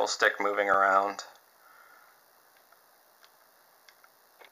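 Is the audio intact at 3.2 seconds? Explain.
Yes, at 3.2 seconds the audio is intact, with no audible fault at that moment.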